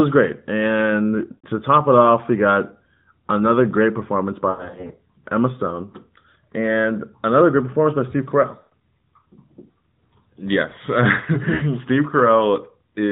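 Speech smears, stretches and fades out at 1.32–1.46 s just before "to top it off", 4.50–4.99 s between "got another great performance" and "emma stone", 8.60–8.73 s after "performance by steve carell", and 11.54–11.63 s. These are lost AMR speech frames: the decoder repeated its last good settings with falling gain.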